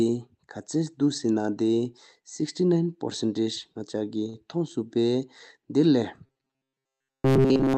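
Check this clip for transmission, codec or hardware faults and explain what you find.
Two faults are audible in this speech clip, over a call path whose upper band stops near 8 kHz.

From 4.29 to 4.36 s there is a short stall from a late packet. The jitter buffer ran dry, so the receiver held the last sound for 44 ms until the packet arrived, then resumed without skipping anything. The result is a drawn-out sound, and playback sits 44 ms later afterwards.

From 6.26 s to the end, the speech has a robotic sound, likely from repeated short buffers. Roughly 70% of the audio is replaced by loops of a brief fragment, imposing a steady 133 Hz buzz, which fits a buffer of about 7.5 ms. The voice turns rigid and metallic.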